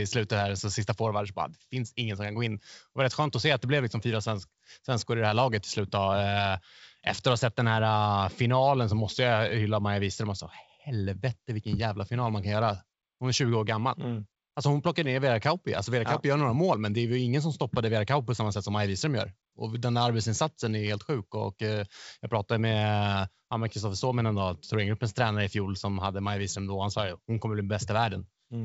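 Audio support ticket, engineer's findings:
No fault found: wideband telephone-path speech with the G.722 coding behaving as expected, band-limited with nothing above about 7.7 kHz, and only faint codec traces, which fits the full-rate 64 kbit/s mode.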